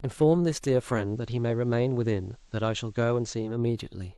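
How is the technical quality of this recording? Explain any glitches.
The speech carries one glitch. From 0.91 to 3.59 s, digital radio blending to analogue occurs. The receiver lost its digital stream and cross-faded over 209 ms to the station's FM broadcast. Level drops about 2 dB. Faint hiss sits roughly 40 dB down.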